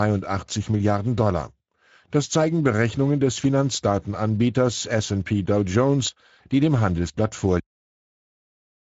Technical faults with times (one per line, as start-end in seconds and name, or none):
0.00-8.97 Speex codec
7.60-8.97 cut-off end